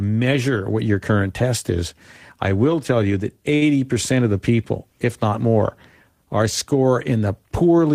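Between "will tell you that" and "of the people if", 3.55 to 3.77 s, a short stall from a late packet empties the jitter buffer. 60 ms of the last sound is stretched with nothing lost, adding 60 ms delay. It sounds held, with a slight buzz or dip; spectrograms show flat, repeated bands.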